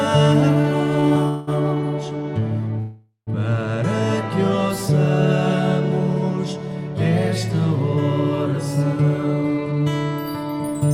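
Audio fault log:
0.61–1.49 s, repeated stalls (stutter): packets kept arriving late, so the jitter buffer ran dry four times, the longest gap about 190 ms. The receiver stretched the last sound to fill roughly 258 ms, close to a third of the span, so the audio drags and stutters without losing anything.
2.79–3.29 s, call audio freeze: a single longer hold-up, likely packets delayed in transit, emptied the buffer. The last sound is carried on for about 476 ms, fading to around 120 ms of silence, then the audio resumes where it stopped, a gap inserted and nothing missing.
9.02–9.87 s and 10.43–10.90 s, jitter buffer speed-up: with surplus audio queued, the receiver trimmed short pitch-period pieces in quick succession, roughly 100 ms and 70 ms in all. Playback runs at 113% and 111% at the same pitch, sounding hurried.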